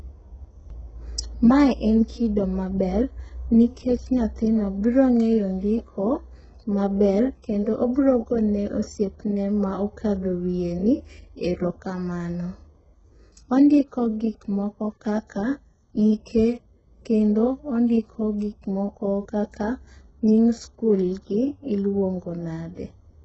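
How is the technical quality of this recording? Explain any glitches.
Technical quality is poor throughout the speech. Sibilants sound gritty and metallic, nothing reaches above 8 kHz, and the treble feels synthetic rather than natural. This is likely heavy HE-AAC compression at a very low bitrate, roughly 8 kbps. Spectral band replication rebuilds the upper band from copied lower bands, so its harmonics don't line up with the real ones.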